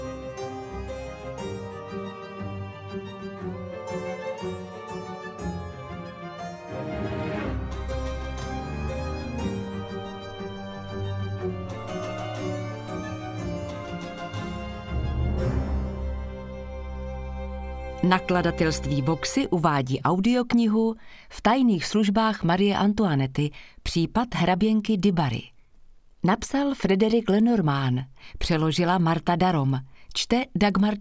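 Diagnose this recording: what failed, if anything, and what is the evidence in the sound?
From 24.8 s to the end, a steady ticking at 10 Hz rides on the sound and is present only while there is signal. This is a resampler restarted on every block: the sample-rate conversion, which fits 24 kHz to 16 kHz, processes each 100 ms block in isolation, so every block edge carries a small error.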